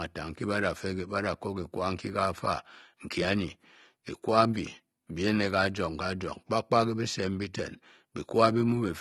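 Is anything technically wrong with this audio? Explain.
Yes. Throughout, the speech sounds dull and smeared, with fizzing, warbling sibilants. This is likely AAC compression, whose lowered bandwidth and spectral gaps fit a bitrate near 32 kbps.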